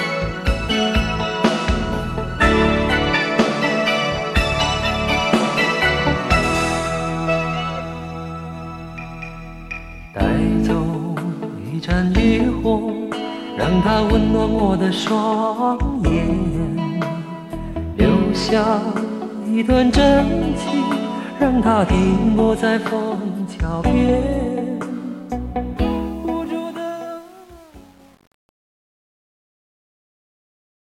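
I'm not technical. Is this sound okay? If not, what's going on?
No. Truncation distortion on a fade runs from 25.77 s to the end. As the sound fades out, the volume is cut into too few coarse steps, which fits an 8-bit stage. From 26.21 s it turns gritty instead of fading smoothly.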